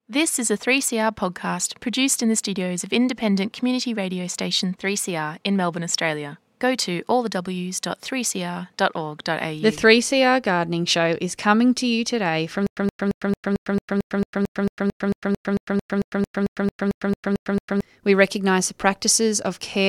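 From 12.67 s to 17.81 s the speech locks into a stutter with silent gaps: a 120 ms fragment plays, drops into about 103 ms of dead digital silence, then plays again, repeating at a steady 223 ms rhythm about 23 times before normal playback resumes. The likely cause is a stalled player or stream that replayed its last buffered fragment at each retry and then ran empty, so the speech that belonged in those five seconds never arrives.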